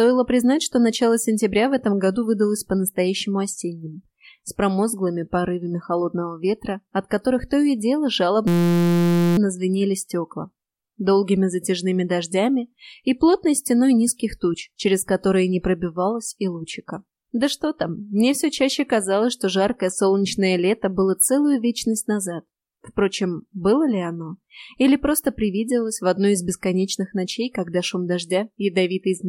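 From 8.48 to 9.38 s there's a system hang loop: the system froze and the hardware kept replaying a 5.8 ms chunk, fitting a 256-sample buffer, giving a steady 172 Hz buzz.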